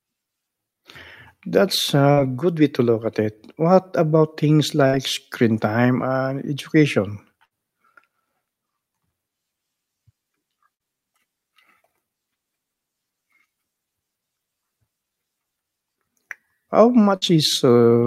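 Burst of packet loss at 2.11, 4.87, 7.45, 10.74 and 17.16 s: each time about 50–60 ms of concealment stretches and fades the last sound, then 60 ms of speech is skipped.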